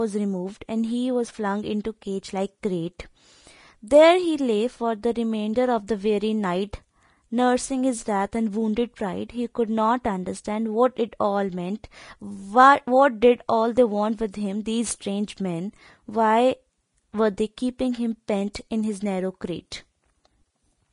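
Throughout the speech, nothing sounds above about 10.6 kHz, and the treble beneath that cut-off turns hissy and grainy, which points to likely Vorbis compression at a low bitrate, around 31 kbps. Unlike a plain low-pass filter, the remaining highs carry coarse, noise-like texture.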